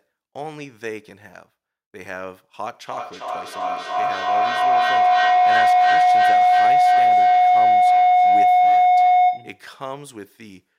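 A microphone-to-loudspeaker loop on the call gained level on every pass, producing feedback howl from 2.87 s to 9.7 s. Repeats build rather than fade, narrowing to a tone around 700 Hz that repeats roughly every third of a second and peaks about 16 dB above the speech.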